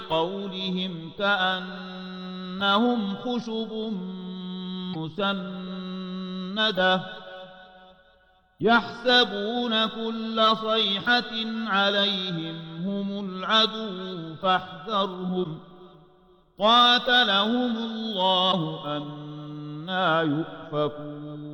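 Brief garbled glitches, each lasting about one 26 ms frame, break the sound at 4.93–4.95 s, 15.43–15.46 s and 18.51–18.54 s. Each is likely a broken MP3 bit reservoir. After frames go missing, the next frame reaches back for borrowed bits and decodes another frame's bytes instead.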